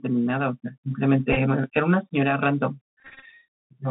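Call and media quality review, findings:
Bluetooth CVSD headset codec, whole clip. Speech band limited to roughly 150 Hz to 3.5 kHz. Plainly audible damage: scratchy s sounds, granular hiss underneath, distortion where loud high content outruns the adaptive step. Sound fits 64 kbps CVSD on a headset link.

Bluetooth headset packet repeated, 1.33 to 1.37 s. About 22.5 ms lost across 37.5 ms; longest run only a few milliseconds. Brief ticks and buzz as the headset chip redecodes stale packet bits in 3.75 ms steps.

Bluetooth headset packet repeated, 3.0 to 3.25 s. About 154 ms lost across 248 ms, longest run around 20 ms. Repeats every 3.75 ms produce a steady buzz near 267 Hz until clean packets resume. Points to a radio link dropout.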